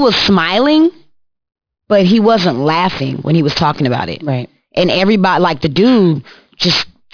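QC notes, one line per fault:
throughout: aliasing. The audio was downsampled without an anti-aliasing filter, which fits a drop to about 11 kHz, so content above the 5.5 kHz fold point mirrors back down as false, unrelated tones about 10 dB below the speech. Sibilants turn gritty and metallic, with energy crowding the band edge.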